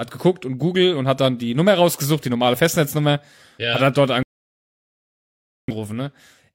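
Speech, with a rebuffering stall after "ja hat dann": silence from 4.23 to 5.68 s adds 1.45 s while the player waits for data. Unlike a dropout, the speech resumes exactly where it stopped, with nothing missing.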